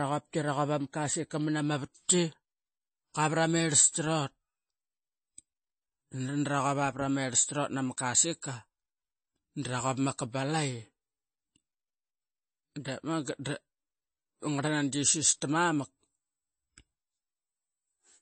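Heavy MP3 compression is the likely cause of damage running through the whole of this speech. Short of bits, the encoder has cut the treble, leaving nothing above 8.3 kHz, and has dropped weak frequency lines that flicker in and out from frame to frame. The damage is plainly audible: a watery, swirling texture, metallic chirps on s sounds, and smeared attacks, which fits a low bitrate around 32 kbps.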